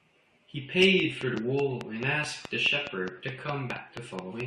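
From 1.00 s to 4.41 s a regular train of clicks, around twenty at 4.7 per second and some 15 dB above the speech, points to likely interference or a struggling interface. Damaged data in the compressed stream at 1.34 s and from 3.70 to 3.72 s makes the decoder lose frame sync, giving brief blips.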